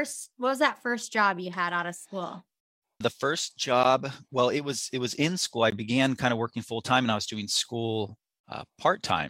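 At 3.83 s, just before "well it was it", and again at 5.71 s, between "was in school I" and "began kind of working", the speech drops to silence for about 13 ms and 17 ms, then resumes. This pattern fits a Bluetooth stall, likely a playback buffer running dry while delayed packets were resent.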